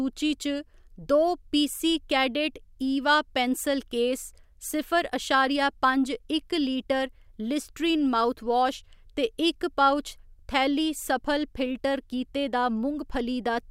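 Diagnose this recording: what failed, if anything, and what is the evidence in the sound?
Nothing failed in this recording, and the sound gives no evidence of a fault.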